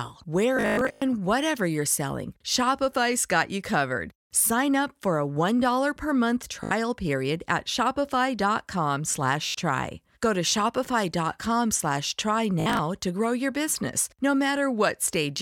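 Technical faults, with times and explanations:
0.57–1.02 s, 6.64–6.71 s, 9.47–9.55 s, 12.60–12.79 s: Bluetooth stutter. Brief slices of speech repeat as a buzzy machine-gun stutter, worst before "whatever you're selling". Late or lost packets made the receiver replay its last buffer, then jump ahead.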